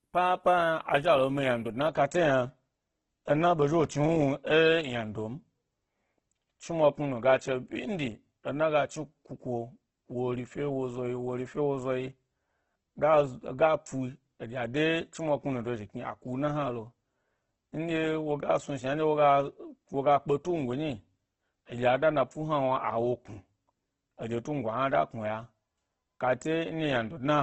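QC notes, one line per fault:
throughout: Opus compression. The speech sounds heavily grainy and rough, with a noisy haze laid over the tones and nothing above 12 kHz. The likely cause is Opus in its music mode at a bitrate that fits about 12 kbps. Short of bits, the encoder keeps each band's energy but fills the detail with folded or noise-like content. Unlike MP3 damage, there is little swirling or spectral holes, only pervasive graininess.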